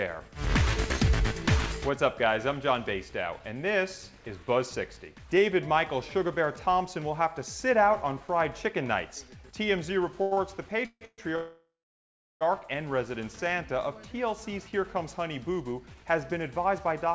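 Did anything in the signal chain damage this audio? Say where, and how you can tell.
Yes. At 10.22–10.33 s and again at 10.33–10.39 s, the sound hangs on for about 93 ms and then 36 ms, with a slight buzz or dip, before continuing. This is a short stall from a late packet at the network/jitter-buffer stage: the receiver stretched the last sound while waiting.

Three call audio freezes follow. At 10.86–11.03 s and 11.05–11.20 s the last sound turns to a fading buzz or hiss, then about 60 ms and 40 ms of silence. At 11.36–12.43 s it goes quiet for about 710 ms. The likely cause is packets held up in the network, emptying the jitter buffer.

From 15.80 to 17.08 s the audio runs about 5% fast at unchanged pitch and sounds hurried. This is a jitter buffer speed-up in call processing: after the backlog, the receiver cut many pitch-period-sized slivers, around 70 ms in total, to shrink its delay. 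Throughout, the call codec limits the audio to 8 kHz.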